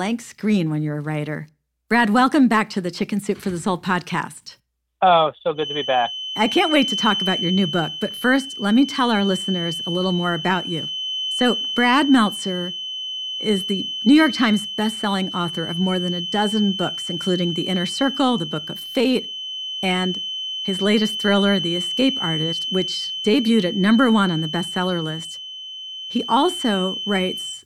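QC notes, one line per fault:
5.53 s to end: feedback whistle. A thin, steady tone at 3 kHz sits about 10 dB under the speech, swelling and fading slowly in level. Likely the loudspeaker-to-microphone loop is held at the edge of feedback, sustaining one frequency without building further.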